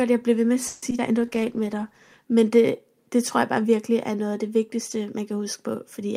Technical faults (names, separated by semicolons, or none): repeated packet loss (robotic sound); call bitrate drop